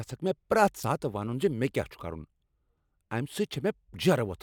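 At 0.81 s, lasting about 40 ms to 0.84 s, the speech is broken by damaged data in a compressed stream. Some bytes in that stretch were corrupted, so the decoder misread those frames, lost sync and had to hunt for the next valid frame header before the speech resumes on "ونن ز". It sounds like a brief chirp, squawk, click or short hole. The waveform shows an abrupt discontinuity there.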